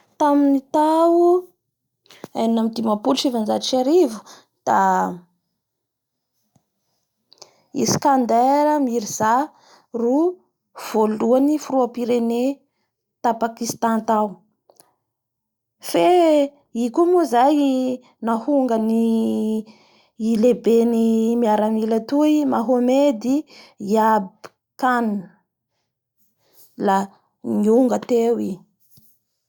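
No technical faults can be heard anywhere in this speech recording. There is nothing to report at any point along its timeline.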